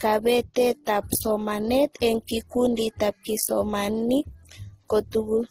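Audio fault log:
throughout, transcoding between lossy codecs: the speech has a layered, doubly processed quality, with watery, swirling smear on consonants sitting under a dull, band-limited top end and a rough, buzzy texture. This is likely two lossy codecs in series, in a way that fits MP3 at around 40 kbit/s followed by Opus at around 16 kbit/s. Opus wastes its small budget re-encoding the MP3's artefacts while adding its own, and the lower high-frequency cut-off of the two remains.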